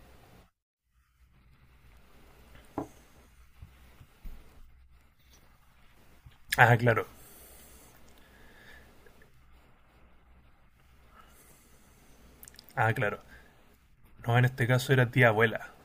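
No technical faults can be heard anywhere in the recording. There is nothing to place on a timeline or describe as a fault.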